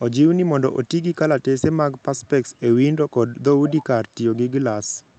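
At 3.68 s, the far end's echo canceller likely let some of its loudspeaker output back into its microphone, and that residue was returned down the line. The result is an echo leak lasting until 3.84 s: a faint copy of the speech trailing the original by 183 ms, sitting roughly 15 dB below it, brief and scrappy rather than sustained. It rides on the call codec's band-limited sound, which tops out near 8 kHz.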